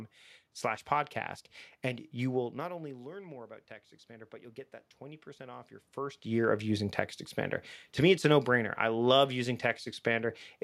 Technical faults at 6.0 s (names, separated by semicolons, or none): automatic gain rising